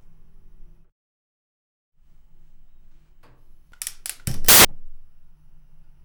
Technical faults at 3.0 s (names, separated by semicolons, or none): none